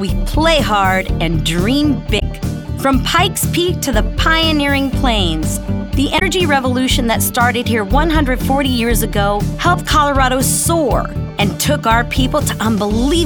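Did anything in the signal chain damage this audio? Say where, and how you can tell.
Yes. Damaged data in a compressed stream, at the codec stage, at 2.16–2.22 s and 6.15–6.22 s: short blips where corrupt frames made the decoder lose sync.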